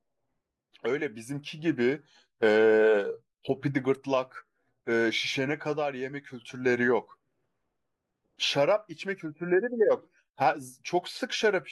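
A short speech recording with nothing technically wrong to hear anywhere in it.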